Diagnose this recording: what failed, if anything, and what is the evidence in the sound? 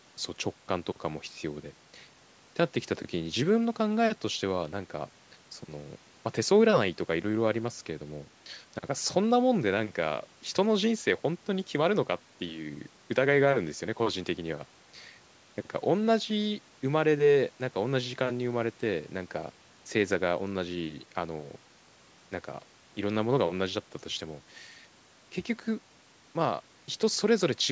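Nothing failed: the speech shows only the ordinary effects of call microphone processing, with the lowest bass rolled off by its high-pass filter and no content above 8 kHz, and no stage in the chain leaves any other audible mark on the signal.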